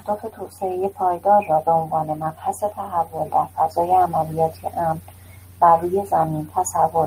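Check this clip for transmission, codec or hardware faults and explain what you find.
Nothing in the signal points to a transmission, codec or hardware fault; the speech holds steady and continuous throughout.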